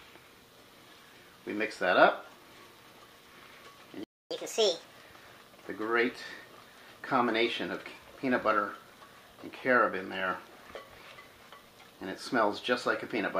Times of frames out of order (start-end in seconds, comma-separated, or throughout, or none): none